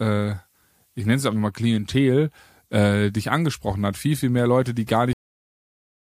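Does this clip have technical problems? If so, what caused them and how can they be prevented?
Yes: a cut-off end. At 5.13 s the speech stops mid-sound and drops straight to digital silence for the rest of the clip, because the final buffers were never written out. The waveform ends in a vertical edge, and the spectrogram shows a sharp wall with no decay tail. To prevent it, flush and close the recording or export buffers fully before stopping the stream.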